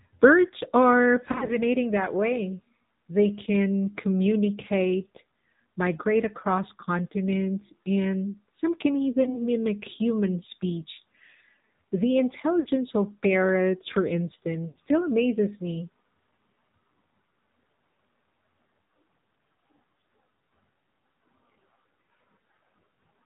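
Throughout, the speech carries the AMR narrowband mobile codec. Nothing above 4 kHz survives, and the buzzy, synthetic vocal-tract sound fits a low mode near 7.4 kbps, unlike a plain lowpass.

Lost AMR speech frames occur at 1.32–1.57 s, at 9.24–9.40 s between "continents and some can" and "mimic human speech", at 12.60–12.69 s before "of parrots for", at 14.68–14.78 s before "still amazes me", and at 17.76–17.78 s. Each time, the decoder stretches the last sound with fading gain, giving a brief dip or warble rather than a hard click or silent gap.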